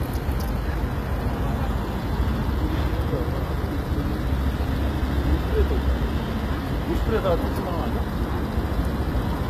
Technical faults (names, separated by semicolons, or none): HE-AAC compression